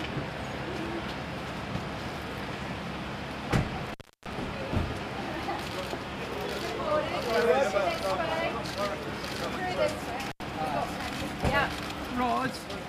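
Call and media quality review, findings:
Intermittent contact, loose cable or plug: line opens twice, 3.86–4.34 s (about 316 ms open) and 10.30–10.41 s (about 85 ms open). Signal path breaks momentarily; sound cuts to faint hiss, with crackle at each break and reconnect.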